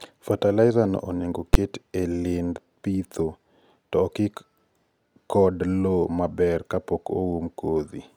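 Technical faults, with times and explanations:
1.54 s, invalid numbers at full scale: between "fertilizer no onego" and "e lind pidho" a single sharp bang cuts across the speech. A calculation returned infinite or invalid values that were clamped to the maximum, so about 11 ms of output is pinned at one extreme value, which fits one 512-sample block. That is too brief to hear separate pops, so it fuses into one bang. The waveform shows a flat-topped slab far beyond the speech peaks, and the spectrogram shows a bright vertical stripe spanning all frequencies.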